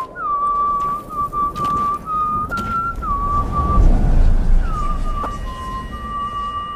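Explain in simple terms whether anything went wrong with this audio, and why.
Two brief glitches, at 2.48 to 2.52 s and 5.23 to 5.26 s, come from damaged data in a compressed stream: corrupted file bytes make the decoder lose its place, unlike a simple dropped signal.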